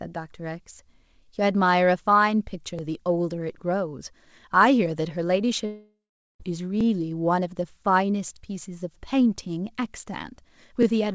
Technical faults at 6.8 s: overlapping chunks

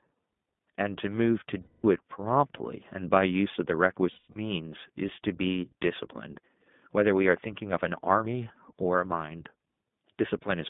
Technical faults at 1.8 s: iLBC codec; lost iLBC frames

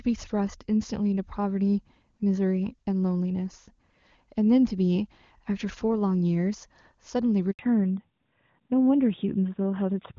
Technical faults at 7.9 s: fallback to narrowband

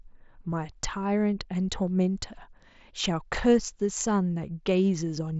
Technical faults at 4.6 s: none

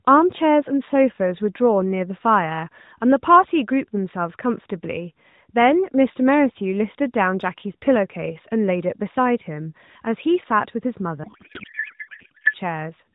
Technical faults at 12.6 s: codec payload misread

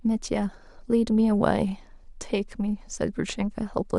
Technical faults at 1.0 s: none

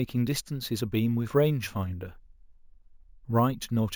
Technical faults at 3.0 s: imaging from sample-and-hold upsampling

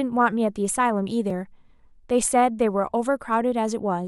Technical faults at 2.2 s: none

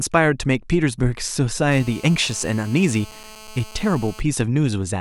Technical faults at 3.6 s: GSM phone buzz

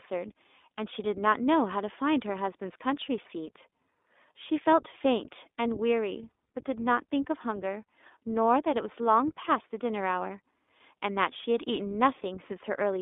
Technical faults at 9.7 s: iLBC codec

